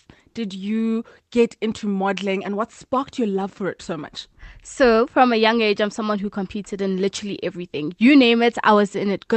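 No technical faults occur anywhere in the speech, which comes through an ordinary call path with its usual coding.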